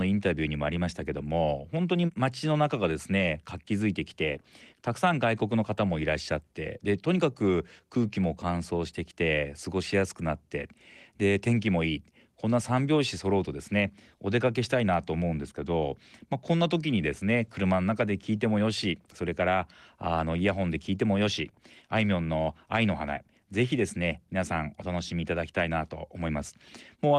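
A speech recording with nothing technically wrong with it.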